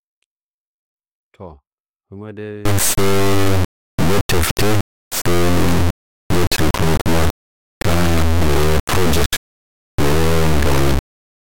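From 2.65 s to the end, the speech turns into an extremely loud, buzzing square wave that drops to silence in quiet passages. This is integer read as float: it fits 32-bit integer samples being read as 32-bit float values, which swing between near zero and clipping.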